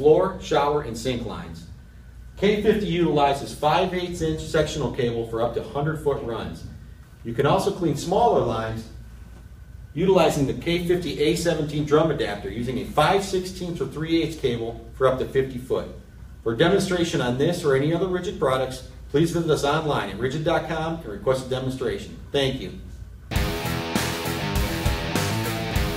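No technical faults can be heard anywhere in the audio. Nothing in it points to a problem in capture, processing or playback.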